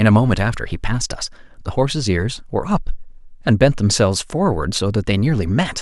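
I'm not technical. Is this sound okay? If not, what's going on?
Yes, nothing's wrong with this recording; no problems to report.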